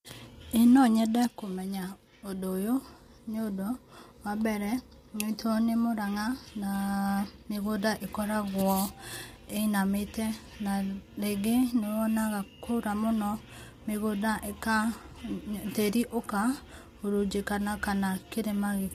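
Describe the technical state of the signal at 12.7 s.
At 12.7 s the speech sounds rough and grainy, with a noisy haze between the pitch harmonics and nothing above 15.6 kHz. This is low-delay AAC compression, present across the whole clip, and the likely cause is AAC-ELD. Its short frames cannot separate closely spaced harmonics cleanly, and at a low bitrate the coarse coding leaves noise between them. The plainly audible damage fits a bitrate of about 32 kbps.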